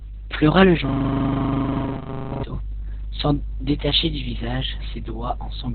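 From start to finish the speech carries Opus voice compression at heavy damage. The sound points to SILK narrowband mode at a very low bitrate, around 6 kbps, with long frames near 60 ms. The linear-prediction coder has discarded everything above 4.3 kHz and quantised the excitation coarsely, so the voice sounds muffled, hoarse and faintly robotic. On a spectrogram the energy stops flat at 4.3 kHz, with blurred, smeared harmonics below.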